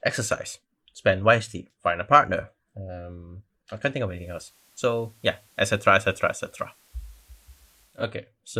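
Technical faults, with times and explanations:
4.03–8.08 s, digital radio blending to analogue: the receiver lost its digital stream and cross-faded over about 280 ms to the station's FM broadcast, then returned. The analogue path adds faint hiss, roughly 35 dB under the speech, and drops the level by about 1 dB.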